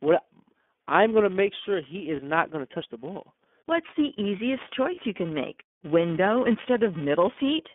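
Throughout the speech, a filter restarted on every block adds a steady buzz near 345 Hz, which fits a 128-sample block. Each block begins from an empty filter state, so a small transient appears at every boundary. A spectrogram shows a harmonic comb at 345 Hz and its multiples, and the waveform shows regularly spaced ticks that grow with loudness.

The iLBC codec limits the line to roughly 200 Hz to 3.5 kHz, and its coding damage is plainly audible. Speech stays intelligible but sounds rough and synthetic, and the codec runs in its 30 ms frame mode. A spectrogram shows a hard ceiling at 3.5 kHz and smeared, grainy harmonics below it.

Lost iLBC frames occur at 2.16 s, between "gonna make sure he" and "not gonna touch the", and at 4.95 s, between "the easiest" and "you can make". Each loss replaces a 30 ms frame with a repeated pitch cycle mixed with noise, heard as a brief held, buzzy or breathy vowel. 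On a spectrogram each gap appears as flat, frozen harmonics, and clear speech returns right after.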